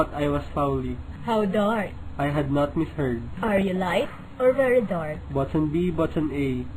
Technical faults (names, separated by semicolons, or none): DAB burbling